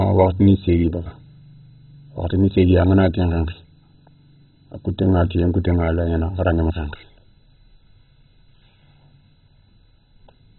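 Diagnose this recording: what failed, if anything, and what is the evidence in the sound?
Codec stage, likely MP2 compression: throughout, speech is dull with nothing above 4.1 kHz, upper sub-bands switched off, survivors coarsely quantised, giving gurgling graininess.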